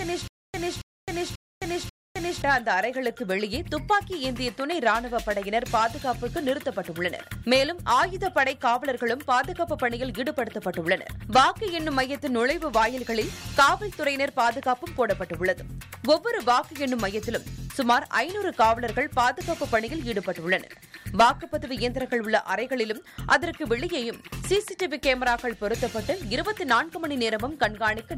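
From the very start until 2.42 s, the same 276 ms burst of audio plays four times, each followed by about 263 ms of dead silence, a stutter with silent gaps repeating every 539 ms. This likely comes from a stalled player or stream replaying its last fragment at each retry, so the audio meant for those gaps is lost.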